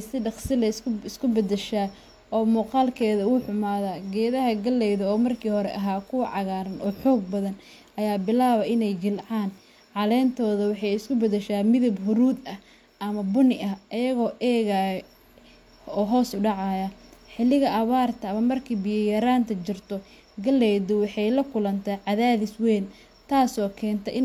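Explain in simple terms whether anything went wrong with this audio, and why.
Nothing in the speech recording stood out as having gone wrong on listening.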